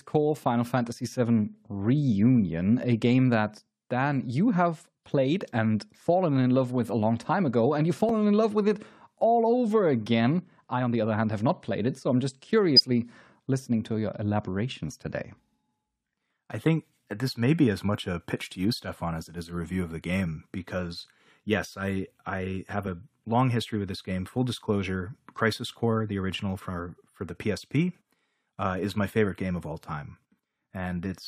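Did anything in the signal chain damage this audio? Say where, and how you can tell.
Yes. Compressed frames were skipped at the codec stage, at 8.07–8.10 s and 12.76–12.79 s. The sound jumps forward about 20 ms and then about 70 ms.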